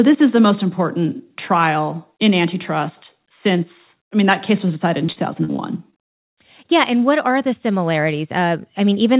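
From 5.06 to 5.94 s, just after "case was decided in", the speech turns choppy and robotic, with five brief dropouts, the longest about 43 ms. This is repeated packet loss: each lost packet was patched by stretching the preceding sound, concealing about 140 ms in total. The call path's narrowband coding, with nothing above 4 kHz, is heard throughout.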